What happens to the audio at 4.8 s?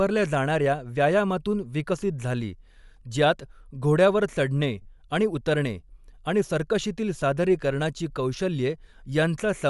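At 4.82 to 4.85 s, about 30 ms drops out as lost LE Audio frames. The decoder papers over the gap by repeating the last spectrum with scrambled phases, so you hear a brief noisy smear, consistent with three lost 10 ms frames. Underneath that, the speech carries a plainly audible breathy, grainy edge, likely from Bluetooth LC3 compression at around 48 kbps.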